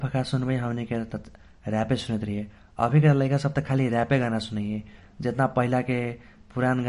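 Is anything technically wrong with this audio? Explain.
Yes. The speech carries MP3 compression damage throughout, and it is plainly audible. Nothing sounds above 10.6 kHz, so the treble is dull. Weak detail swirls and turns watery, and s sounds chirp metallically. This is likely an MP3 encoder short of bits, which fits a low bitrate near 40 kbps. It drops quiet frequency lines, and they flicker between frames.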